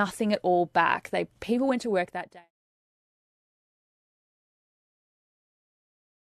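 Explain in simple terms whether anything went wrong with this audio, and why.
Nothing went wrong here; the speech just eases gently down from around 2 seconds until it's gone at 2.52 s, the way an editor would fade it out, with no click or sudden cut at the end.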